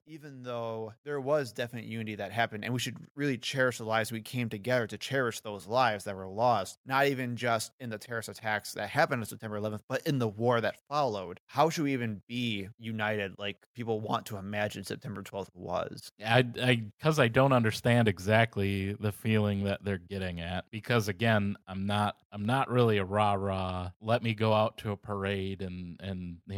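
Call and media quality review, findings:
Automatic gain rising, 0.05 to 15.83 s: speech and background noise floor swell together by about 15 dB. AGC raising gain on quiet input. Waveform envelope ramps steadily, and the spectrogram brightens across all bands, noise included.

Automatic gain falling, 16.2 to 24.72 s, ending just before "to a": level sinks about 6 dB, background with it. AGC backing off loud input. Waveform envelope tapers, and the spectrogram dims uniformly.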